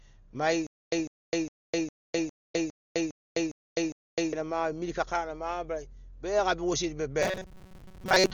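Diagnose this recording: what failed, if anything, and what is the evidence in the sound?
The whole speech clip is dull and heavily damaged. That sounds like Dolby Digital compression at a codec stage, likely around 40 kbps.

From 0.67 to 4.33 s there's a stutter with silent gaps. A 150 ms burst repeats nine times, every 407 ms, with 257 ms of silence between. That's likely a playback stall, and the missing audio is gone.

From 7.22 s to the end there's a robotic sound from repeated short buffers. A rigid 188 Hz buzz replaces most of the audio, likely from a driver or buffer repeating about 5.3 ms chunks.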